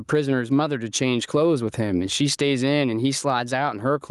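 Speech runs through the whole clip with gain pumping: the gain swings by roughly 15 dB, and the voice sounds squashed and flat in level. The likely cause is input gain set far too high, with a fast limiter repeatedly clamping it down.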